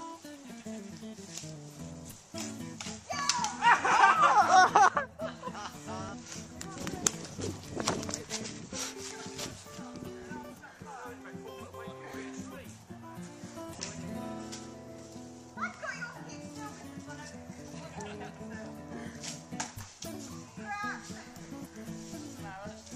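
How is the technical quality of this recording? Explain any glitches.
The recording is marred by five short bursts of damaged data in a compressed stream. Brief chirps or squawks, each a few tens of milliseconds, occur at 6.09–6.15 s, 8.41–8.47 s, 13.75–13.80 s, 16.12–16.17 s and 19.18–19.22 s. Corrupted bytes made the decoder misread those frames and lose sync until it found the next valid frame header.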